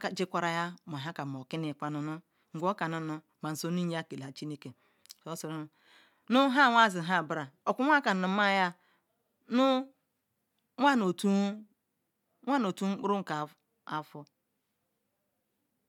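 Speech recording with no technical faults to report.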